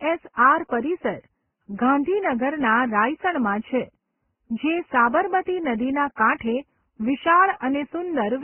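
Transcoding between lossy codecs runs throughout the speech. Nothing is heard above 3.1 kHz, and smeared, watery artefacts sit under a second layer of coding grain. This is likely a very low-rate Vorbis encode passed through Opus, with the narrow first cut-off surviving.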